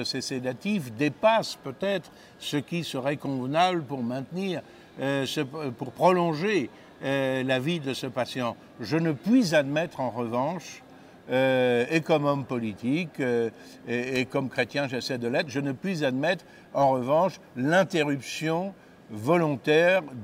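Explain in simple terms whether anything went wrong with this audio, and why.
Nothing went wrong with this audio that a listener can pick out. There is no point in the recording where something breaks or misbehaves.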